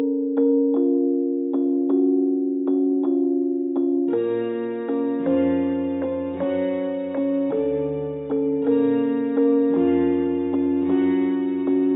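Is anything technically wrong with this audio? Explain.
No, nothing technically wrong turns up on listening; there are no faults to report.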